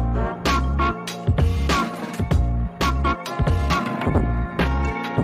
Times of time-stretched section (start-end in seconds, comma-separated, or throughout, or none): 2.48-5.23